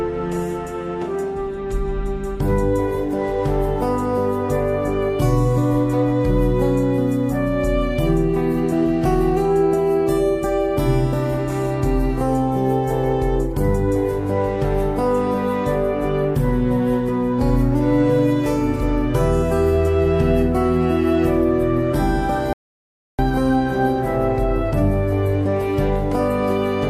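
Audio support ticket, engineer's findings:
Audio dropout to silence, 22.53 s to 23.19 s. Sound cuts off abruptly, then returns mid-flow. Gap about 0.66 s long. Pure silence in the gap, no room tone. Content in that span is lost, not recoverable. Likely cause: input path interrupted, via device disconnect, link failure or a stray mute, while the recorder kept writing silence. Check the capture chain around that point.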